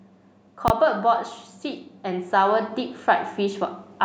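At 0.68 s there's a loud bang lasting until 0.70 s, classic invalid numbers at full scale. Some calculation produced infinite or invalid values, and the output got pinned at an extreme value for that 20 ms block, so the short burst lands as a single hard bang.

From 1.62 s to 3.67 s there's automatic gain rising. The gain control decided the input was too quiet and pushed its gain up gradually, by about 6 dB. You hear the speech and the background swell together over those two seconds.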